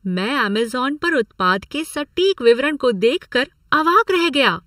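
Throughout the speech, channel delay (comb filtering) makes the sound hollow and phasey. One channel lags by under a millisecond before the mono sum, cutting a first notch near 700 Hz and evenly spaced ones above. Unlike flanging, these notches never sweep.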